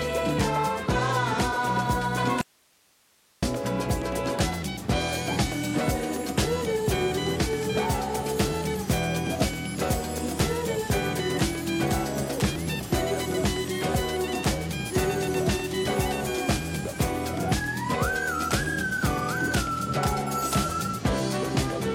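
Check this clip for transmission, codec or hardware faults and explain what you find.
There's one fault here, an audio dropout to a faint residue. From 2.41 to 3.43 s the sound cuts out abruptly for about a second, leaving only hiss roughly 35 dB down. The likely cause is a brief signal loss while the downstream path stayed live.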